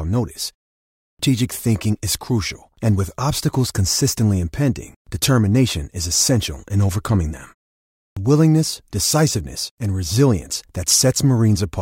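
At 0.79 s and again at 7.77 s, a clipped start after a pause: following roughly 0.3 s of silence, the output wakes late, swallowing about 0.4 s so speech resumes abruptly.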